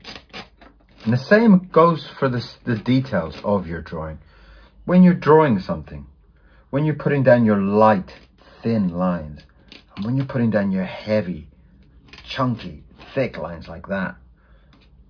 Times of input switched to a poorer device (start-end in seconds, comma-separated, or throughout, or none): none